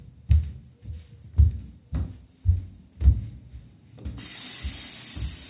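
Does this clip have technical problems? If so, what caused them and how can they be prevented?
No, there are no technical faults to report in this recording of sounds, so there is nothing to trace back or prevent.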